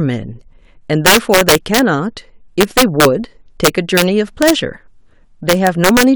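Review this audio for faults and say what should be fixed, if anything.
Violent cracks burst through the loud passages of the speech at 1.06–1.79 s, 2.61–3.05 s, 3.65–4.02 s, 4.42–4.50 s and 5.49–6.03 s. This is integer overflow: with gain overdriving the signal by about 1 to 7 dB, peaks exceed the integer ceiling and wrap to the opposite extreme instead of being held there. Fix it by using saturating arithmetic or a limiter before the integer conversion, or by leaving enough headroom in the gain stage.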